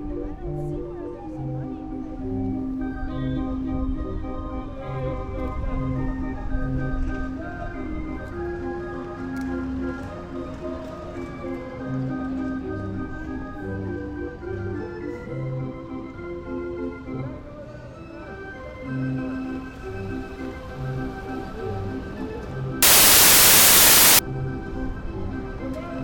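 Samples built from the wrong bytes occur from 22.83 to 24.19 s. Over that stretch, each sample's bytes are misassembled, so the rapidly fluctuating low-order bits land in the most significant position. The result is a burst of loud, harsh broadband noise.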